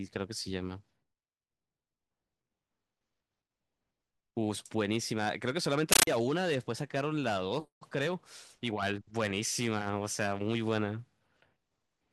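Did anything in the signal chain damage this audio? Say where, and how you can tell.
Yes, at the playback stage, from 5.92 to 6.07 s the speech gives way to a compressed stream played as audio. Coded bitstream data was passed over the digital link as if it were PCM samples. The sound is harsh, very loud, chattering static, which fits an undecoded AC-3 stream. A waveform shows loud noise bursts about 13.3 ms long, separated by flat zero padding and repeating at 31.25 Hz. A spectrogram shows broadband vertical stripes with silent gaps between them.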